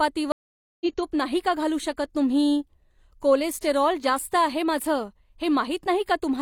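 A speech clip with a stream reconnect from 0.32 to 0.85 s: the sound cuts to silence for about 0.49 s, then resumes with "तूप नाही का घालू" while a fresh decoder picks up mid-stream. Unlike a plain dropout, where audio continues from where it stopped, the speech comes back roughly 0.3 s further along, so a short stretch is simply missing. The connection broke and the player rejoined a live stream that had moved on.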